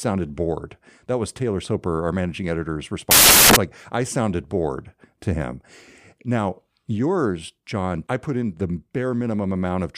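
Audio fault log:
3.11 to 3.56 s, samples built from the wrong bytes. Right after "our managing editor's", the speech gives way to loud, harsh broadband noise for about 0.45 s. Each sample's bytes were assembled wrongly. The fast-changing low bits became the large part of each value.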